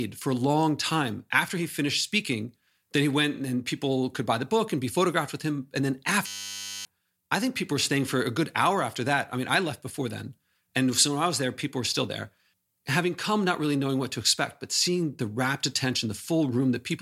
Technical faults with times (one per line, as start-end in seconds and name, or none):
6.27-6.85 system hang loop